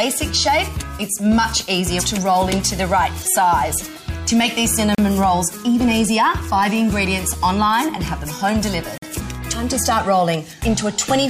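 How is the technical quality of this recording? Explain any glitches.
Two brief silent holes interrupt the recording. At 4.95 s (36 ms) and 8.98 s (46 ms), gaps between stream segments insert hard-edged silence. Their roughly 4-second spacing fits misaligned segment time stamps, and no audio is lost, unlike a dropout.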